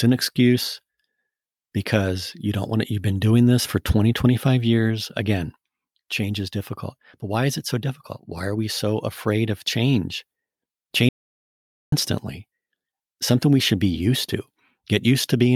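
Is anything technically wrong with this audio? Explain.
Yes. From 11.09 to 11.92 s an audio dropout to silence occurs: the input was likely lost while recording continued, so the speech cuts to silence for about 0.83 s.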